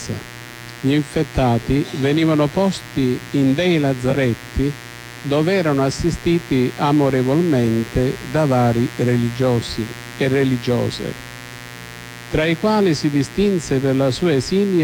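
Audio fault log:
Throughout: mains buzz, a raspy 60 Hz buzz sitting roughly 20 dB under the sound the whole way. Something like a dimmer, rectifier or missing shield is letting in sharp spikes twice every mains cycle, so harmonics stack up into several kHz, hence the edge.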